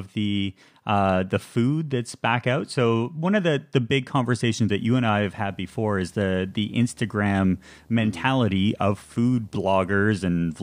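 From 4.71 s, just after "the the big conversations", video or display buzz at 75 Hz sits low under the speech to the end, a screen or video cable coupling in.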